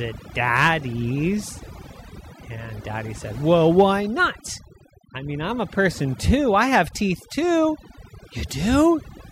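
Overdone noise removal runs through the whole speech clip: an over-aggressive noise reducer cut bands near its noise estimate, leaving twinkling near-silence.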